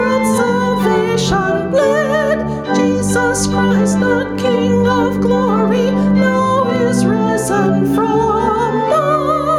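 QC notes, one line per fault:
Throughout, gain pumping: the gain keeps getting pulled down on loud moments, a swing of around 10 dB, so everything sounds squashed. Likely cause is input gain set way too hot, with a fast limiter clamping down.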